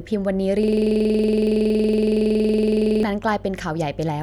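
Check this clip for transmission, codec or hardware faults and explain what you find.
Two hardware faults are audible: continuous mains hum and a system hang loop that freezes the speech for over two seconds.

Mains hum runs throughout. A ground loop or nearby transformer leaks the 50 Hz power line into the signal, heard as a steady low drone about 25 dB below the speech, with some low harmonics above it.

A system hang loop occurs from 0.63 s to 3.03 s. The computer stalled while the audio hardware kept replaying one ring buffer, so a single 46 ms fragment, which fits a 2048-sample buffer, repeats about fifty times, producing a rattling 21.5 Hz stutter.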